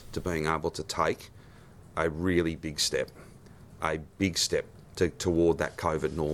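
No technical faults can be heard anywhere in the audio: the signal stays continuous and steady throughout, with no dropouts, glitches or level disturbances.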